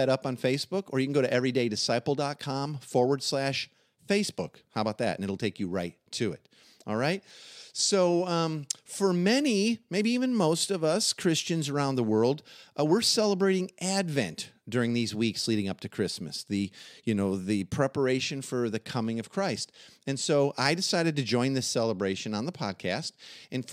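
Nothing in the speech stood out as a technical fault on listening.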